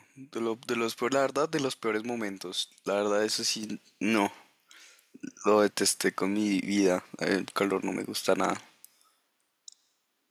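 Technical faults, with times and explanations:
3.63 s, microphone volume stepped up: the level rises by about 7 dB in a single step, with the voice and the background noise jumping together. The call software judged the microphone input too quiet and raised the device's input volume at once instead of gradually.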